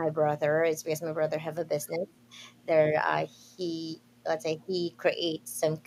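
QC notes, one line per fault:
No faults found in the speech. Nothing in the audio calls for a QC entry.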